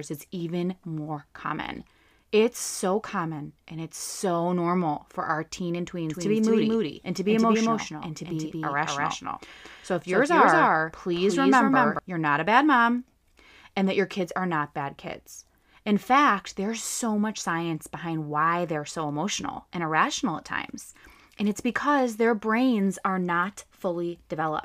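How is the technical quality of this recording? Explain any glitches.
The recording has one clear glitch: a doubled audio track between 6.09 and 11.99 seconds. Across that span the speech is heard twice. A second full-band copy trails the first by roughly a fifth of a second at about the same level, with no decay or room colouring. It cuts in and drops out abruptly. The likely cause is the signal being captured again through a slower path, or an edit leaving two copies misaligned, producing a distinct slapback echo.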